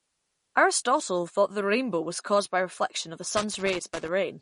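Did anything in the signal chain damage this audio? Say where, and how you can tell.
Yes. At the codec stage, the speech has no content above 10.5 kHz and a plainly audible watery, swirling texture throughout. This is likely MP3 compression at a low bitrate, around 40 kbps, where the encoder removes the treble and drops weak frequency lines from frame to frame.

In the analogue wiring, an irregular burst of crackle and scratching runs from 3.37 to 4.08 s. This is loose connector crackle: a worn or dirty contact repeatedly makes and breaks as it moves, chopping the signal.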